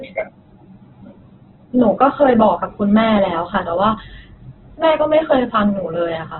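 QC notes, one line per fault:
Throughout: Opus compression. The speech sounds grainy, rough and noisy, and nothing reaches above about 4.2 kHz, so it comes across as narrow and dull. This is likely heavy Opus encoding in its music (CELT) mode at a very low bitrate, about 8 kbps, which cuts the bandwidth to narrowband. With too few bits, the encoder keeps each band's energy but fills in its detail with folded or noise-like content, so the sound gets its gritty texture.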